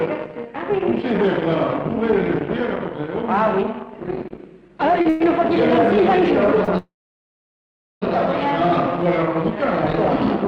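The audio comes through a call codec whose top end stops near 12 kHz, and from 4.23 to 5.22 s it drags and stutters in repeated stalls. Seven brief holds, the longest 110 ms and about a fifth of that stretch in total, occur because packets arrived late and the jitter buffer kept running empty. Each time, the receiver extended the last sound until playback could resume. At 6.64 to 6.70 s a sound is held about 34 ms too long, with a slight buzz or dip. This is a short stall from a late packet: the buffer ran dry, the last sound was stretched, and playback continued from the same point. From 6.78 to 8.04 s the sound freezes into a brief fading tail and then roughly 1.1 s of silence before picking up where it stopped. This call audio freeze likely comes from packets held up in transit, emptying the jitter buffer for about 1.24 s.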